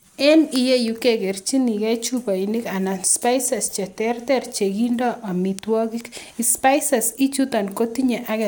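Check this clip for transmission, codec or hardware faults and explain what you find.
No faults found in this recording.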